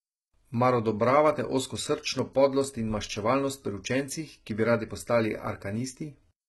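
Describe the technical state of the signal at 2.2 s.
A bit error spike sits at 2.19 s: a flipped bit throws about three samples off by a power of two before they snap back, giving one sharp, broadband tick unrelated to the speech. Around it, the treble is heavily damaged and stops at 11.8 kHz, with gritty, metallic sibilance and misaligned harmonics. The likely cause is HE-AAC compression rebuilding the treble by copying lower bands upward, consistent with a bitrate near 16 kbps.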